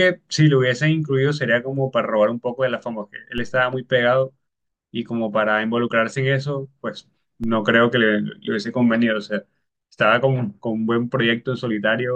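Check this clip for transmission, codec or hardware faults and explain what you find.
Two DC steps occur in this speech, at 3.38 s and 7.44 s. Each time the waveform's zero line jumps by about -23 dBFS and then drifts back as a 2 Hz high-pass bleeds it away. You hear a low thump while the speech continues unchanged. The waveform shows a sudden baseline shift with a slow return, and the spectrogram shows a brief broadband vertical line weighted toward the lowest frequencies.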